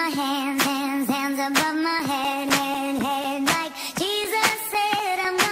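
Periodic USB or driver dropouts: something keeps stalling the audio path every 0.25 s, and each stall swaps a few milliseconds of audio for silence. From 1.99 s to 5.25 s this yields about fifteen evenly spaced ticks, audible wherever sound is present.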